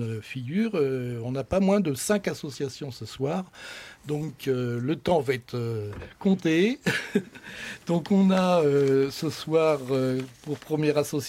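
No technical faults can be heard anywhere in the clip. Nothing in the recording or playback chain draws attention to itself at any point.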